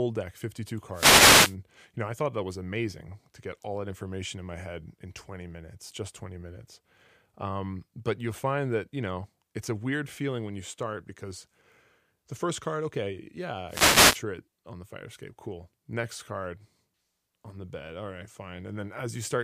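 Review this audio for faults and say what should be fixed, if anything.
Two wireless microphone noise hits occur, at 0.92 to 1.56 s and at 13.67 to 14.23 s. Each is a short burst of static over the speech. The radio link from an analogue FM microphone dropped in strength as reflected signals cancelled at the receiver. The receiver's own noise then rose into the audio. To prevent it, use diversity receivers with well-placed antennas and keep a clear line of sight to the transmitter.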